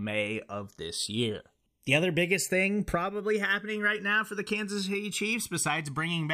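Throughout the speech, the channels drift apart: separate clocks, roughly 150 ppm off, slide the inter-channel delay to about a millisecond, sweeping mono comb notches as slow, steadily progressing flanging rather than periodic modulation.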